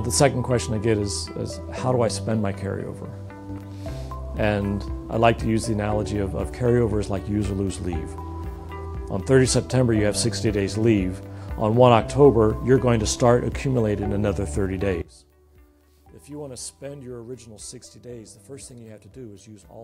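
One channel inverted, 15.02 s to the end: the sound drops about 20 dB to a faint residue, likely reversed polarity cancelling shared content in mono.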